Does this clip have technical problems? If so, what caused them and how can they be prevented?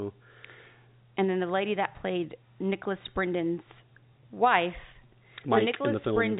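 No, this clip has no technical problems, so there is nothing to prevent.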